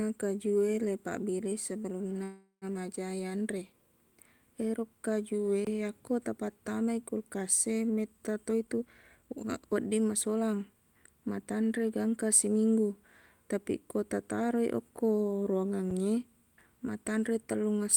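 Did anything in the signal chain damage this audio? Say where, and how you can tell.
Yes. Three kinds of damage are audible.

The first is a call audio freeze in the network stage, from 2.23 to 2.65 s, just before "majaq yanre". The last sound carries on as a fading buzz, then about 130 ms of silence. When the audio resumes, it picks up where it stopped. About 383 ms were filled in and nothing was lost, so the delay grows by that amount. Delayed packets that emptied the jitter buffer are the likely cause.

The second is an underrun with held sample, a driver or buffer fault. It occurs twice. The first is from 5.65 to 5.67 s, between "ero kajuwe" and "yakko tapattamai kulkas e". The waveform goes flat at a held level for 21 ms, which fits a 1024-sample buffer running dry. About 20 ms of live audio are lost. A shorter flat spot of 5 ms occurs at 15.90 s, with about 5 ms lost.

The third is a jitter buffer speed-up in call processing, from 8.65 to 10.75 s, ending before "matanre gangkang siminggu". 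The speech runs at 118% speed but keeps its pitch, so it sounds hurried. The receiver drains excess buffered delay by cutting many short pitch-period pieces in a row. Around 400 ms are removed in total.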